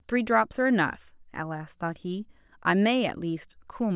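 No technical faults are audible.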